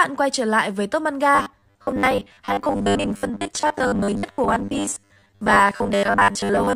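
From 1.35 s right through to about 6.75 s, the speech turns into robotic sound from repeated short buffers. It's a stiff, metallic buzz pinned at 100 Hz that still loosely tracks the talking. The likely cause is new audio arriving too slowly, with the software looping the last 10 ms chunk to fill the gap. That repetition stamps the fixed pitch, and roughly half the real audio gets skipped.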